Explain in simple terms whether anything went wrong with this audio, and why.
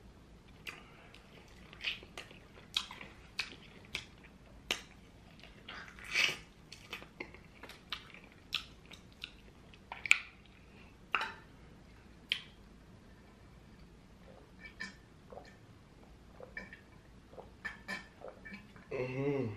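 Nothing went wrong: the recording has no breaks, jumps or sudden changes that would point to a technical problem.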